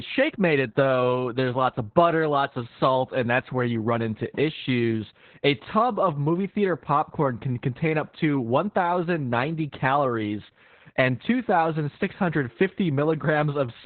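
Opus voice compression affects the whole clip: the speech is narrowband, cut off near 4 kHz, and muffled, hoarse and slightly robotic. The SILK coder is describing the voice with a coarse excitation, which points to a very low bitrate of about 8 kbps.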